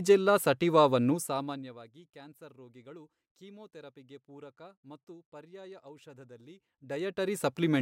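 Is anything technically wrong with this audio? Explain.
No, nothing in this speech recording points to a technical problem.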